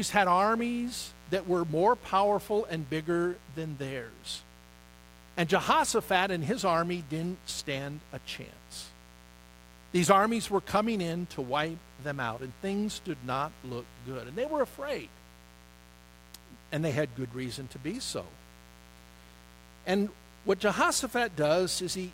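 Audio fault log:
throughout: mains buzz, a steady raspy buzz sitting roughly 25 dB below the speech, built on 60 Hz. Sharp switching spikes twice per mains cycle spray harmonics into the kilohertz range, so it sounds gritty and edged, unlike a smooth, low sine-like hum.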